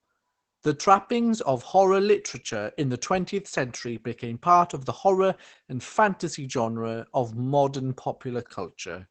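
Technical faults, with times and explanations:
Throughout, Opus voice compression: speech sounds muffled and hoarse. A spectrogram shows nothing above 8.7 kHz and coarse, smeared harmonics, which fits low-rate SILK wideband coding.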